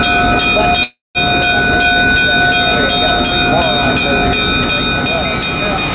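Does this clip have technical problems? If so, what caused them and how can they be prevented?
Yes, there's a call audio freeze from 0.83 to 1.18 s. The sound stretches into a fading buzz, then about 0.17 s of silence, and picks up where it stopped, so roughly 0.32 s of delay is inserted with nothing lost. The likely cause is delayed packets draining the jitter buffer. A steadier network path or a deeper adaptive jitter buffer would prevent it.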